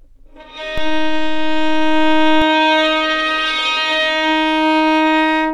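At 0.78 s there's a DC step: the waveform's zero line suddenly jumps to an offset of about -14 dBFS, the kind of shift you get when a converter recalibrates or an input carrying an offset gets switched in. It holds there until 2.42 s and then steps back. You hear each edge as a low thump, one going in and one coming out, while the sound underneath carries on unchanged.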